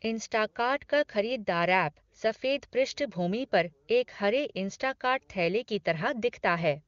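No technical faults can be heard in this speech, which comes through the AMR wideband (HD Voice) codec with at most faint traces of coding, consistent with the codec's top 23.85 kbit/s mode.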